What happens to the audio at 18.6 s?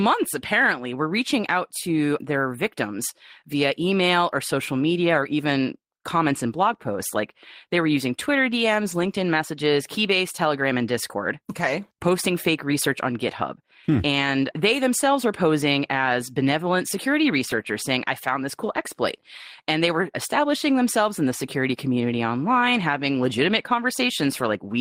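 From 18.63 to 18.81 s the speech turns rougher and noisier for brief stretches, with no gap or dropout. This is a lost packet rebuilt from error correction: several separate packets went missing, but each following packet carried a low-bitrate copy of the lost one through Opus in-band forward error correction, and the decoder played those copies instead. About 100 ms of audio was rebuilt this way, which points to five 20 ms packets.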